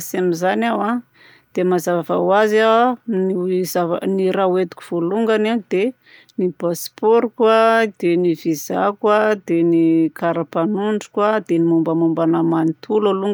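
No technical faults are audible anywhere in the speech recording.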